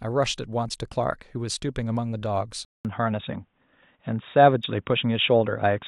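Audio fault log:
2.65 s to the end, input switched to a poorer device: after a 200 ms gap the speech turns dull and boxy, with nothing above 3.8 kHz, a level change of roughly 5 dB and faint new background noise, likely from a switch to a lower-grade mic.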